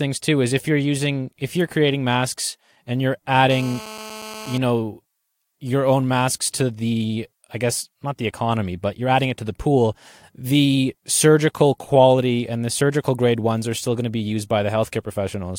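A nearby 2G handset on a call, bursting about 217 times a second, gets its radio pulses rectified in the audio circuit, producing GSM phone buzz from 3.51 to 4.58 s, after "creating masks and you're" and before "know your own masks": a steady, harsh, harmonic-rich rasp about 15 dB below the speech.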